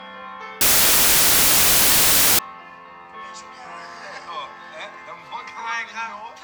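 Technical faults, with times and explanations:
0.61 to 2.39 s, samples built from the wrong bytes: the reader is pairing up each sample's bytes wrongly, so the jittery low bits end up as the big part of every value. You get a blast of loud, harsh broadband noise.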